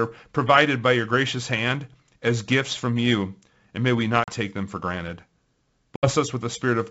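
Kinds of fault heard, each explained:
Packet loss on an ADPCM call: at 4.24 s and 5.96 s, 40 ms and 70 ms drop to hard-edged silence, knocking the decoder's predictor and step size out of step.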